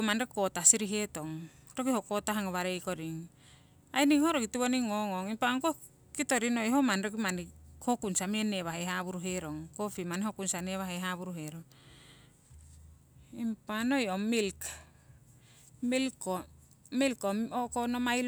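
No technical faults can be heard anywhere in it.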